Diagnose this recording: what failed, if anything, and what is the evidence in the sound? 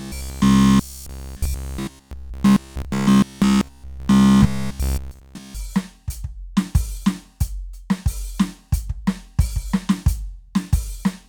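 From 0.02 s to 5.55 s the music collapses into robotic sound from repeated short buffers: a rigid, metallic buzz at 66.7 Hz covers the whole passage, and the music's shape survives only loosely. The cause is likely a starved driver or buffer stage replaying its last fragment, which fits a 15 ms repeat, since 66.7 Hz is one over that period. Unlike a stutter or dropout, nothing goes silent; nearly every moment is a repeat.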